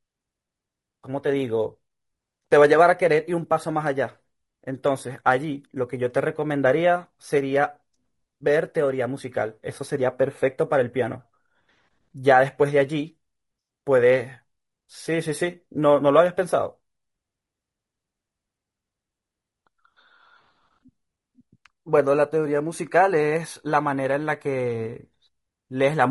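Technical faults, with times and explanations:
Throughout, low-delay AAC compression: the speech was likely squeezed through a low-delay AAC coder such as AAC-ELD, at a rate that fits around 32 kbps. It codes only about 500 frequency lines a frame through a low-delay window, and the tight bit budget leaves them coarsely quantized, so the damage is plainly audible. The voice comes out rough and grainy, with noise filling the gaps between harmonics and a thinned, synthetic-sounding upper band.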